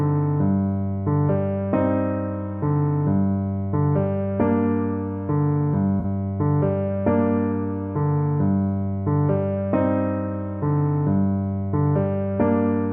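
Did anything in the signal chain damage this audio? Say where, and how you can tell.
Yes. AAC frame loss with concealment at 6.00 to 6.05 s, in the codec stage. A gap of about 43 ms is patched over, which fits two lost frames. The decoder rebuilt the missing stretch from the last good spectrum, so the audio there turns into a smeared, noisy or phasey patch before clean decoding resumes. The loss is too short for the concealment to fade toward silence.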